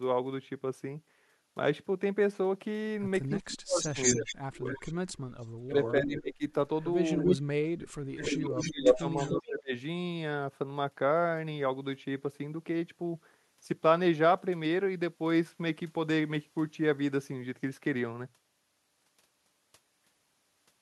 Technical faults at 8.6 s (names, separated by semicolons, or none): speech suppressed in double talk; echo leak